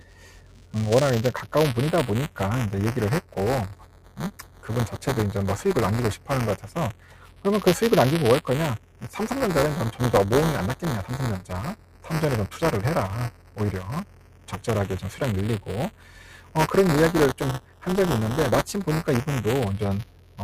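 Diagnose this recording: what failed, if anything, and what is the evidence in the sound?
Call processing failed: a noise suppressor applied to music or sounds stayed active, treating steady tones and tails as noise. Level swings by around 10 dB throughout, so the sound pumps and thins. On a waveform, transients stand tall while sustained envelopes sag; spectrogram decays fade abruptly.

At the driver or buffer stage, buffer tearing produces a constant 200 Hz buzz whenever sound is present. That rate points to a period of about 5 ms, with a small slice of each period replaced by audio from roughly 10 ms earlier. Expect periodic waveform discontinuities and a 200 Hz harmonic comb on the spectrogram.

The same suppressor also produced sound cut by the noise suppressor at 0 to 4.98 s, 6.16 to 7.45 s, 8.78 to 14.6 s, 15.6 to 16.56 s, 17.6 to 17.84 s, and 20.04 s to the end. Held material drops by up to about 11 dB, showing as dark gaps beside intact onsets.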